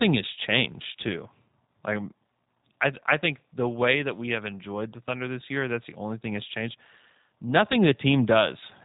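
Speech passed through the G.729 codec, which fits 8 kbit/s: nothing above 3.8 kHz, plus a rough, synthetic buzz throughout that a simple low-pass filter wouldn't add.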